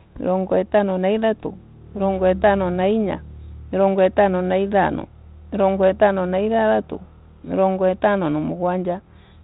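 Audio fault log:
No faults logged; the speech runs over G.726 ADPCM at 32 kbit/s, capped at 4 kHz, with light coding texture.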